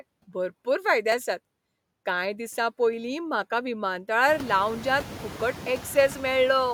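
Noise suppressor artifacts run through the whole clip. The suppressor pulls steady noise down by about 18 dB frame by frame, so the background sinks in pauses and swells under the speech. A spectrogram shows the noise floor pumping in step with the speech. When the room noise rises by about 18 dB around 4.5 s, settling roughly 16 dB below the speech, that pumping becomes easier to hear.

At 1.12 s, just after "भरपूर फायदे", audio is missing between chunks. A very short slice, on the order of 10 ms, drops out and the two sides butt together, which is likely a chunk boundary in processing that runs in 2.5 s blocks. The waveform shows an abrupt seam, and the spectrogram shows a thin vertical break.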